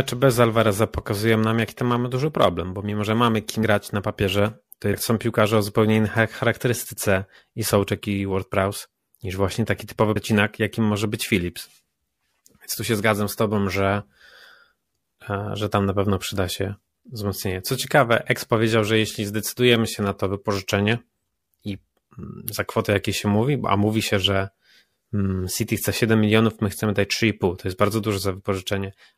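Compressed frames skipped at 3.62 s, 4.93 s and 10.15 s: whole 26.1 ms codec frames go missing, so the speech jumps forward and overlapping frames smear each join into a brief blip. At 3.62 s, after "bo mimo że mamy" and before "na papierze to", about three frames, roughly 70 ms, vanish. At 4.93 s, following "na papierze to" and ahead of "są piłkarze o zupełnie", about four frames, around 100 ms, are lost. At 10.15 s, between "niż właśnie taki typowy" and "jakim może być", another four frames or so, again around 100 ms, drop out.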